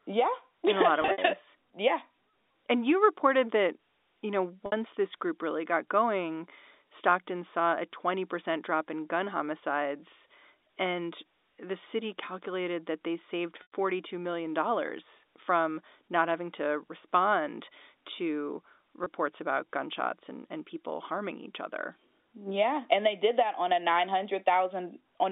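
At 1.02 s, packet loss with pitch repetition sets in. About 100 ms drops out, scattered over 160 ms, the longest gap 60 ms. The receiver repeats the last pitch period to fill each hole, so the sound holds and buzzes briefly. At 4.66 s, after "reported that you know", 60 ms is lost. At 13.62 s, after "calculated that they saved", 100 ms goes. At 19.04 s, after "having to respond to", a single 20 ms gap fits one lost packet.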